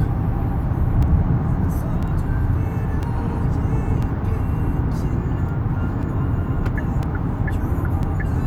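A recording of sounds with periodic USB or driver dropouts. From 1.03 s to 8.03 s, a brief gap of a couple of milliseconds recurs once per second and is filled with silence, heard as a regular tick as a background task stalls the audio driver.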